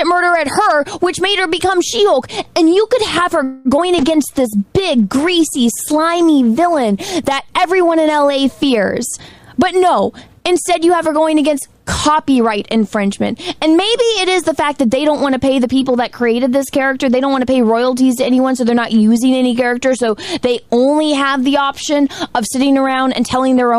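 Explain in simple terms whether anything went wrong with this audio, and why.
Several problems cluster in the first half of the clip.

From 3.43 to 3.68 s there is a call audio freeze. The last sound is stretched into a fading buzz for about a quarter second, most likely because delayed packets emptied the receiver's buffer.

At 3.77 to 3.81 s, short concealed packet loss leaves a brief smear. About 40 ms of audio never arrived and was patched over by continuing the previous sound.

From 3.87 to 4.32 s, a jitter buffer slow-down plays the audio at 93% speed with unchanged pitch. This adds 37 ms to rebuild the buffer's reserve.

From 4.01 to 9.11 s, a call bitrate drop makes the sound rougher and more muffled, worst for about 2.3 s. The encoder was using far fewer bits during this stretch.

From 9.17 to 11.21 s, a jitter buffer speed-up plays the audio at 111% speed. The sound is hurried but keeps the same pitch, and about a fifth of a second of backlog is trimmed away.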